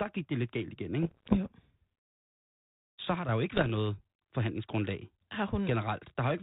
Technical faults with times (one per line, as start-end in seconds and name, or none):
1.02-1.37 bit errors on an ADPCM link
3.54-3.70 bit errors on an ADPCM link